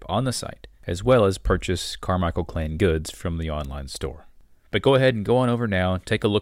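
Nothing goes wrong anywhere in this bit of speech, so there's no technical fault to point to at any moment.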